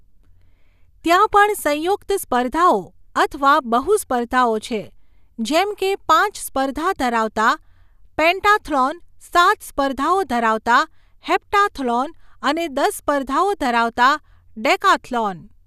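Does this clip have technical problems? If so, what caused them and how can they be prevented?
No, there are no technical problems to trace or prevent in this recording.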